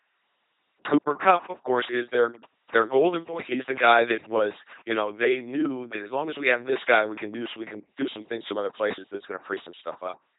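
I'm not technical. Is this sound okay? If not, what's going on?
No. For the whole clip, the speech has passed through an LPC-10 vocoder. It rebuilds each moment from a simple buzz or hiss shaped by a crude filter, so voices sound robotic and mechanical. Nothing above about 3.8 kHz survives, and there's heavy damage throughout.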